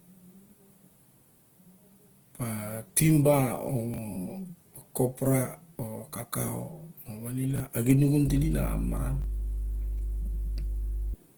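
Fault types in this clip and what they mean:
Opus compression: Throughout the speech, tones sound grainy, rough and noisy rather than clean. The top end stays wide open, reaching up to about 20.1 kHz, so the sound is not muffled. Bands look filled in rather than left hollow, so there is little swirling. The damage is plainly audible. This is likely Opus coding in its music mode at a low rate, one that fits about 16 kbps, where the encoder runs short of bits and substitutes noise for detail.
chunks out of order: Short pieces of audio play in the wrong sequence. In each case a 20 ms chunk arrives one chunk late and plays after the piece that should follow it. Nothing is missing, but the swap leaves hard joins and a brief jumbled stutter in the speech. This happens three times, at 3.94, 7.56 and 9.22 s. Each disturbance lasts about 40 ms. The speech carries on in order straight afterwards.
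mains hum: A steady low tone at 50 Hz enters at 8.27 s and stays until 11.14 s. It comes from the power line leaking into the signal path, through a ground loop or a nearby transformer. The hum is loud, close to the level of the speech itself. So it sits clearly under everything in that stretch as a constant drone.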